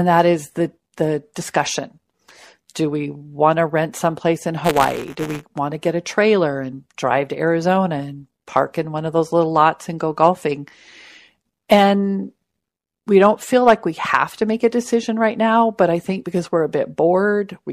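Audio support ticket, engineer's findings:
Robotic buzz/rattle on speech, 4.64–5.44 s, steady at 172 Hz and present only while signal is present. Buffer tearing in the playback ring buffer. Writer and hardware read pointer slipped and cross inside each period. A small slice of every buffer, around 4%, holds audio from one lap earlier (about 10 ms old), with hard joins on both edges. Repeat rate fits a 256-sample buffer. Check pointer sync and period config.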